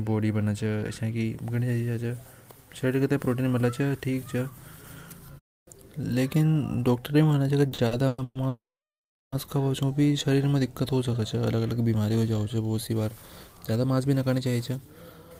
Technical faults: repeated stalls (stutter); call audio freeze; jitter buffer speed-up

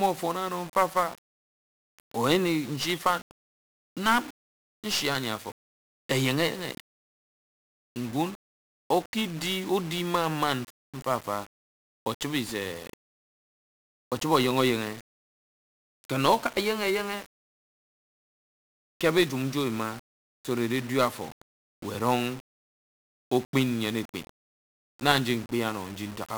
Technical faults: 1-bit DFPWM compression

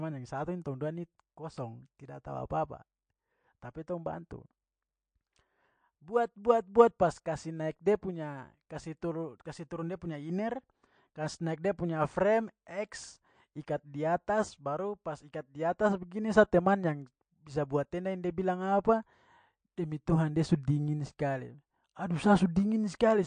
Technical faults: MP3 compression

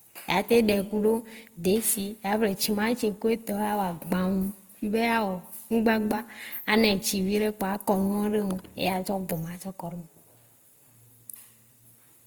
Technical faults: Opus compression

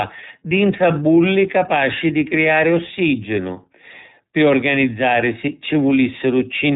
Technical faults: iLBC codec

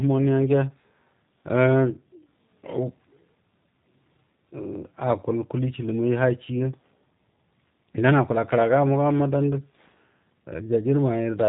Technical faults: G.729 codec

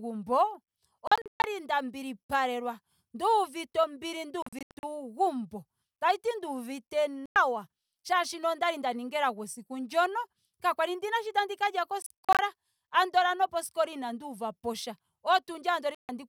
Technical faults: Bluetooth dropout

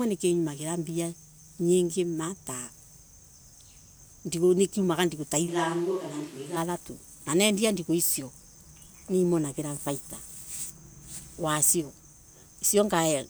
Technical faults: switch to a distant microphone

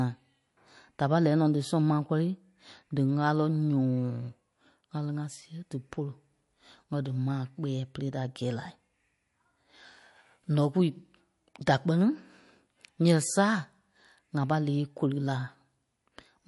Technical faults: MP3 compression

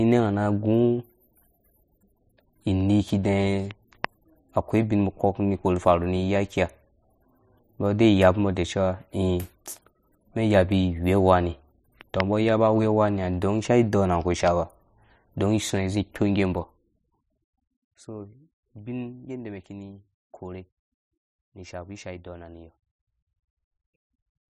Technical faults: zipper noise

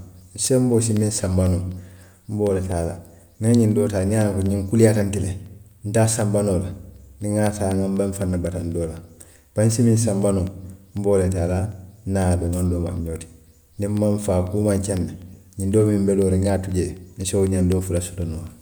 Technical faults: periodic USB or driver dropouts

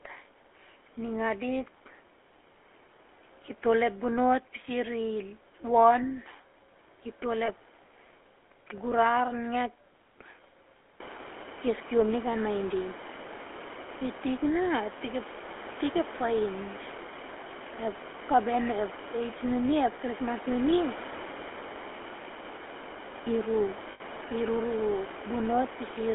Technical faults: GSM full-rate codec; lost GSM frames

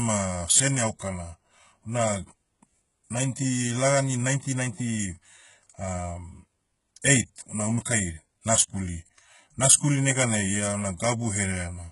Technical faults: HE-AAC compression

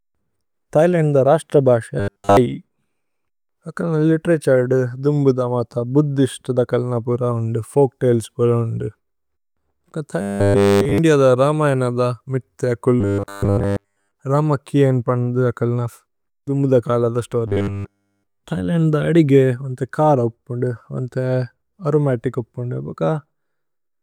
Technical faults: robotic sound from repeated short buffers

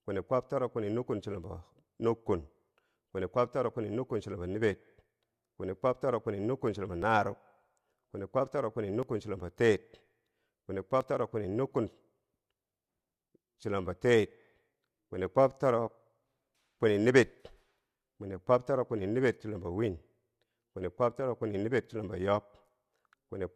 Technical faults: overlap between stream segments

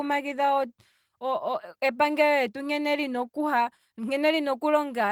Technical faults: none

